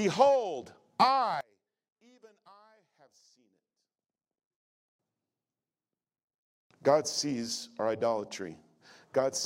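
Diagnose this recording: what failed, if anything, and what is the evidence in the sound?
From 1.41 s to 4.99 s the speech drops by about 31 dB, leaving only a faint residue before full level returns. This is the signature of one channel inverted: the cause is likely a polarity-swapped lead in the analogue wiring, so the centred speech cancels when left and right are summed to mono. On the waveform the envelope collapses to a sliver for that span. On the spectrogram the energy thins out.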